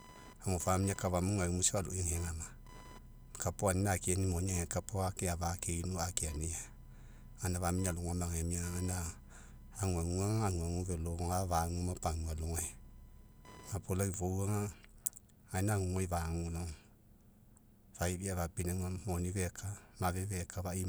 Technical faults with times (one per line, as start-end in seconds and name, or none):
0.00-14.02 computer activity noise